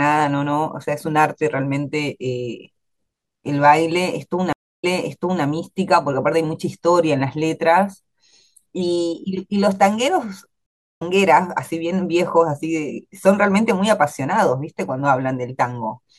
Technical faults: stream reconnect

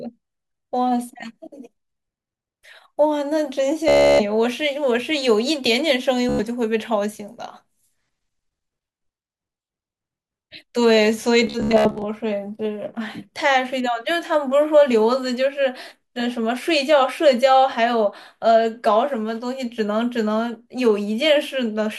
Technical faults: Bluetooth stutter

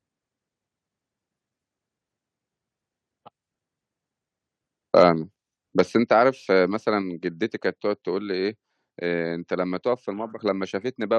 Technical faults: microphone overload; microphone volume stepped down

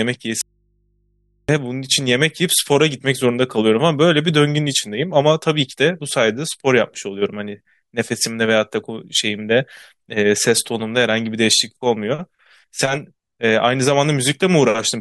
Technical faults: audio dropout to a faint residue

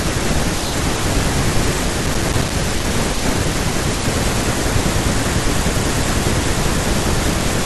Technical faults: processor overload crackle

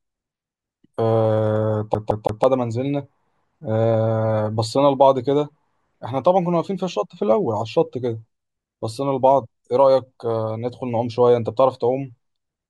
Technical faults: CD stuck on one turn

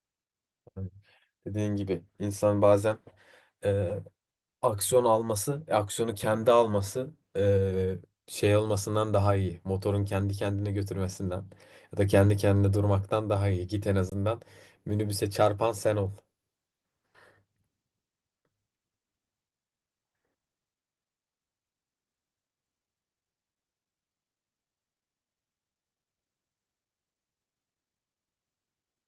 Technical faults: underrun with held sample

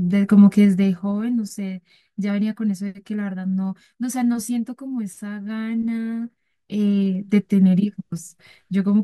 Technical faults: zipper noise

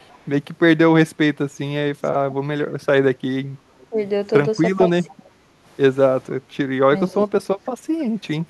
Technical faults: echo leak; speech suppressed in double talk; background gated by the echo canceller

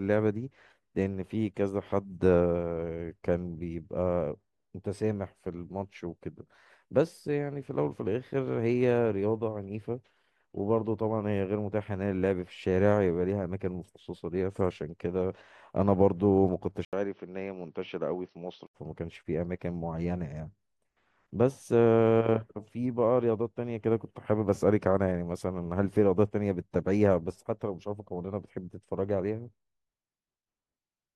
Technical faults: input switched to a poorer device

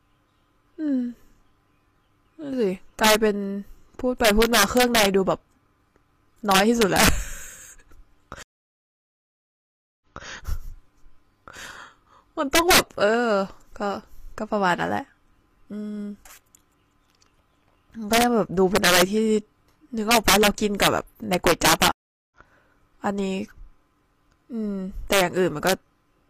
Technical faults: integer overflow; stream reconnect

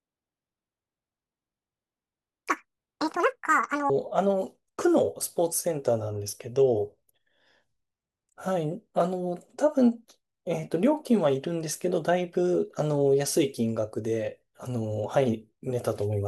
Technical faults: audio read two samples at a time (double speed)

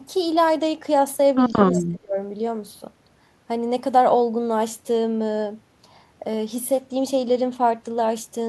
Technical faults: speech suppressed in double talk; echo leak

